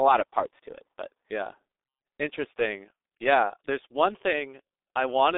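From start to finish the speech is carried by the G.723.1 codec, and the damage is heavy. The line passes only about 300 Hz to 3.7 kHz, and the coarse, slowly updated voice model is consistent with a low-rate stream near 6 kbit/s. Voices come out muffled and hoarse, with smeared consonants. On a spectrogram, energy stops sharply above 3.7 kHz and below 300 Hz, harmonics look blurred, and fricatives show as faint, grainy patches.

At 2.93 s, just before "yeah there's one", VoIP packet loss concealed by the speech codec takes out 60 ms of audio. That length fits two lost 30 ms frames. The decoder fills the gap by repeating its last pitch and filter at a falling gain, so the sound turns into a short, fading buzzy tone or coloured noise until about 2.99 s. In the waveform the gap shows as a repetitive, decaying pattern. On a spectrogram it appears as flat, frozen harmonic stripes that dim, with the following syllable weak as the decoder recovers.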